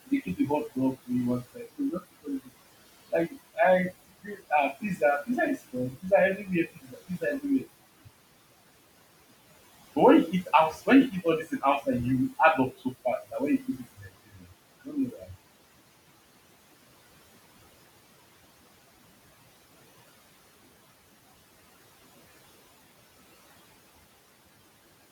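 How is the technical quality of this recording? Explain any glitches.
The recording is affected by an overactive noise suppressor, which both colours the background and clips parts of the speech.

Noise suppressor artifacts run through the whole clip: the processor pulls down bands it judges to be steady noise by about 17 dB, frame by frame. The room noise, about 19 dB under the speech, dips between phrases and swells beneath them.

Speech cut by the noise suppressor occurs at 2.0 to 2.28 s, 6.76 to 7.22 s, 13.98 to 14.08 s, 14.32 to 14.52 s and 15.11 to 15.3 s. The suppressor mistook quiet speech for noise and attenuated it, by up to about 18 dB at its deepest, so brief stretches of a tenth to a fifth of a second sound swallowed or faint.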